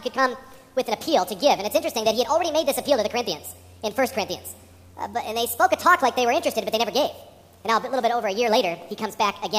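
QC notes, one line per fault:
Throughout: wrong sample rate. Everything runs 1.5 times fast and sits about 7 semitones high, which fits 32 kHz material played at 48 kHz unconverted. On a spectrogram every harmonic band shifts up by that ratio; the waveform's events arrive compressed in time.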